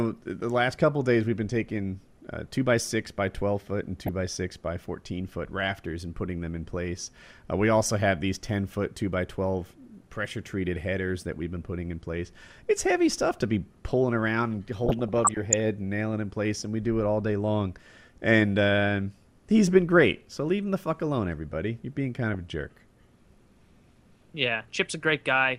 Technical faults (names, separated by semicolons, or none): DAB burbling